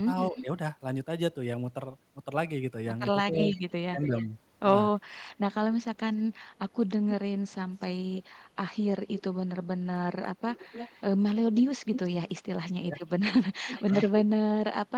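An echo canceller on a loudspeaker end likely let part of its microphone pickup through. This echo leak returns a copy of the speech about 0.28 to 0.30 s late, at 0.26–0.45 s, 3.34–4.26 s, 7.5–8.2 s, 9.17–9.22 s and 10.55–14.12 s. It sits around 10 to 25 dB below the direct speech.

When both sides talked at once, the canceller likely could not tell its talker from the echo and turned both down. This speech suppressed in double talk causes dips of about 5 dB at 0.32–0.47 s, about 10 dB at 3.3–4.27 s and about 15 dB at 12.86–13.17 s.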